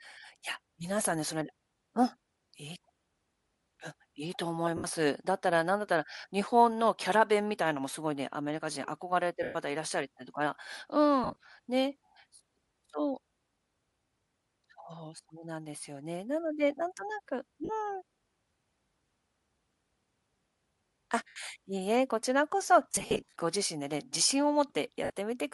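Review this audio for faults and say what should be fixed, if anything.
The speech has a breathy, grainy edge throughout, with the upper spectrum thinned and replaced by hiss-like texture. This is likely Bluetooth LC3 compression at a modest rate, consistent with around 48 kbps and 10 ms transform frames. The encoder drops many high-frequency coefficients and fills the gaps with noise. On a spectrogram, the upper band looks speckled and patchy instead of showing clear harmonic detail. To prevent it, configure the LE Audio link for a higher LC3 bitrate.

Lost LE Audio frames cause brief smeared dropouts at 4.77 s (70 ms), 9.43 s (120 ms), 11.24 s (90 ms spread over 120 ms, longest run about 40 ms), 17.65 s (40 ms), 21.28 s (80 ms), 22.92 s (270 ms scattered over 460 ms, longest run about 50 ms) and 25.04 s (60 ms). The decoder repeats the last spectrum with randomised signs, so voiced sound turns into a noisy blur that dims on the longer gaps. 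A spectrogram shows harmonic lines dissolving into diffuse noise, and the waveform loses its periodic shape. To prevent it, improve radio link reliability by reducing distance and interference.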